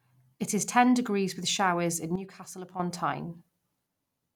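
At 2.16 s, right after "degrees with showers in", the speech drops abruptly by about 10 dB and stays there until 2.80 s, when it jumps back up: a sudden gain jump. The likely cause is a digital gain change applied between adjacent samples with no ramp. Voice and background noise fall and rise together. On the waveform the envelope steps down and back up with vertical edges, and a spectrogram shows uniformly dimmer energy across all frequencies for that span.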